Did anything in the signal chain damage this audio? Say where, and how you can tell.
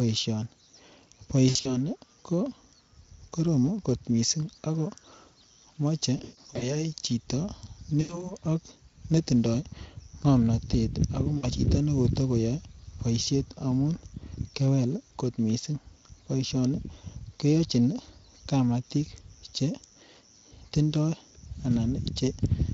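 Yes. VoIP packet loss concealed by the speech codec, at the network stage, occurs at 1.49 to 1.92 s, 6.17 to 6.81 s, 8.01 to 8.35 s and 11.37 to 11.47 s. The worst is at 6.17 s, where about 280 ms goes missing across 440 ms with a 140 ms gap. In each gap the Speex decoder, itself only lightly worn, repeats its last pitch and filter while fading. The speech smears into a buzzy tone or a coloured noise that fades, and stays weak briefly after packets resume.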